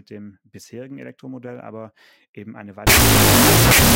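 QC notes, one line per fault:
2.87–3.95 s, wrong sample width: right after "aber eben eine", 16-bit integer data are read as unsigned 8-bit. Each sample splits into two bytes, so playback runs at half speed, an octave low. Low bytes become loud noise, with only the high bytes carrying the buried signal.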